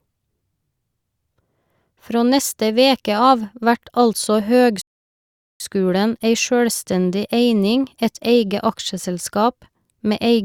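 At 4.81 seconds the speech stops dead and falls silent. This is a rebuffering stall: the player ran out of downloaded audio and waited for more. At 5.60 seconds it resumes exactly where it stopped. Nothing is skipped, but about 0.79 seconds of silence is added.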